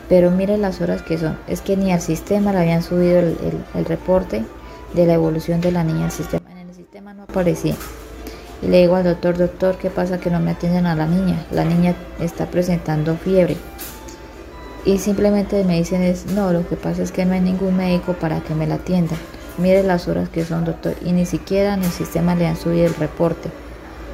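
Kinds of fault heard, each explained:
One channel inverted: From 6.38 to 7.29 s the sound collapses by about 22 dB, and what's left is a faint copy, with the centre gone. That's likely one side flipped in polarity, so the shared content cancels when the channels fold together.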